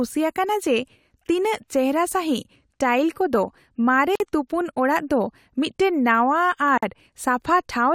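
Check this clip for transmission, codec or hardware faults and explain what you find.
Two gaps at joins of encoded pieces occur, at 4.15 s (47 ms) and 6.78 s (49 ms). Untrimmed encoder delay and padding leave silences in continuous speech, seen as vertical blank bands with smeared edges.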